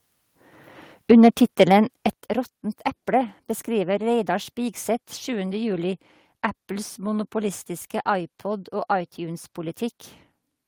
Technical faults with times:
2.13 microphone volume stepped down

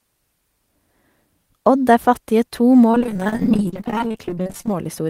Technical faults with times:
2.91-4.74 repeated packet loss (robotic sound)

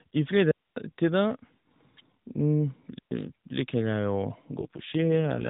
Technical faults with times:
0.51-0.76 digital wireless dropout
2.99-3.11 digital wireless dropout
4.60-5.49 AMR rate drop

